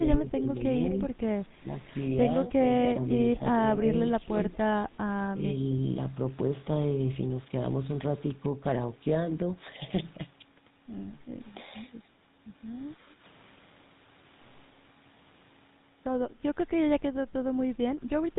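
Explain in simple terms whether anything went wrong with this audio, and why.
GSM full-rate codec, throughout the clip: the speech is squeezed through an early mobile-phone codec that cuts everything above 4 kHz, leaving it buzzy and gravelly.

Speech suppressed in double talk, at 0.0–0.51 s, 3.38–4.36 s and 4.85–5.42 s: the voice briefly dips and thins, likely because both sides spoke at once and the echo canceller turned it down.

Echo leak, at 4.53–4.57 s: a faint copy of the voice returns about 0.23 s late, likely a loudspeaker's echo that wasn't fully removed and was sent back.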